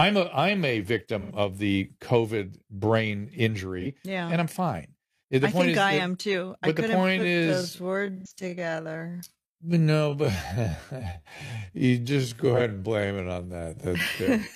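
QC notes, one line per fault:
1.20–1.31 s, 3.81–3.87 s, 8.17–8.33 s, 12.55–12.62 s: AAC frame loss with concealment. Short smeared, noisy patches, after "a I'm a", before "yeah and I'm fine", and at two points in the slowed section. The decoder rebuilt the missing audio from the last good spectrum, so the patches are steady and phasey rather than silent. The gaps of about 85 ms and 43 ms fit two frames and one frame. On a spectrogram, each patch is a flat, blurred smear with the harmonics losing their fine structure and hard edges at either end.
6.94 s to end: time-stretched section. From "am too I couldn't" onward the speech is slowed to about 0.54 times its pace while the pitch stays the same. It sounds drawn out, likely from stretching software repeating short slices to fill the length. On a spectrogram, syllables and pauses widen abruptly at 6.94 s with no shift in harmonic spacing.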